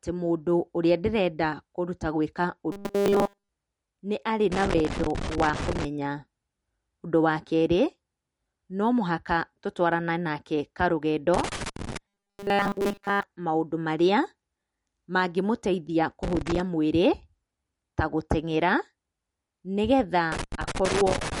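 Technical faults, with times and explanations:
Throughout: MP3 compression. The sound has plainly audible watery artefacts, likely from an encoder starved of bits at about 48 kbps.
2.72–3.49 s and 12.08–13.23 s: robotic sound from repeated short buffers. A rigid 200 Hz buzz appears, which fits a 5 ms segment repeating. The first event is entirely repeats and the second mostly. Late buffer delivery is the likely cause.
4.52–5.85 s, 11.34–11.97 s, 16.23–16.60 s and 20.32–21.4 s: loose connector crackle. Irregular bursts of scratching occur as a poor contact makes and breaks, chopping the signal.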